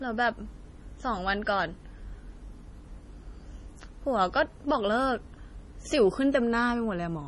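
Speech here carries heavy MP3 compression damage from start to finish: nothing survives above about 11.4 kHz, and weak spectral detail flickers in and out between frames, giving that watery, swirly texture, which fits a starved bitrate around 32 kbps as the likely cause.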